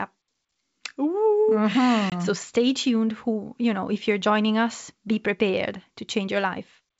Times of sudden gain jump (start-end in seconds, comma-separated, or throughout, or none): none